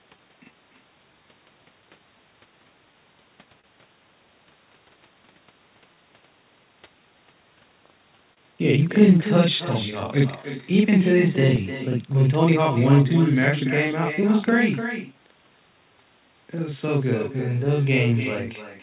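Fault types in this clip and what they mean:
Channel delay (doubling): One channel lags the other by 42.67 ms, which fits a 2048-sample buffer, and the two are summed to mono. Every syllable gets an equal-level slap copy. Unlike echo, the copy is as loud as the original and arrives much sooner.
Echo with no canceller: The far end's loudspeaker is picked up by its microphone and sent back, so the speech is shadowed roughly 300 ms later by a thinner copy at about 10 dB down. It is quieter and later than the doubling.
Clock drift between sender and receiver: The sender's clock runs roughly 2% slow relative to the receiver's. The jitter buffer keeps draining and must be topped up, so small timing irregularities persist through the whole clip rather than clustering at one moment.
Repeated timing corrections: From 0.17 s to 17.67 s the receiver plays at 99% speed, stretching the audio in small, unevenly spaced steps. 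These add about 200 ms in total and are heard, if at all, as slight hiccups or an unsteady tempo rather than distinct dropouts.
Short stall from a late packet: At 3.61 s a packet arrived late, so the receiver held the last sound for 27 ms before carrying on. Nothing is lost. It is a single brief held moment, unlike the spread-out gaps later.
Scattered short gaps: Between 6.73 s and 13.12 s about seven lost or late packets were patched by extending the preceding sound. None exceeds about 30 ms. They are heard as separate small ticks or smears spread across that stretch, not one held sound.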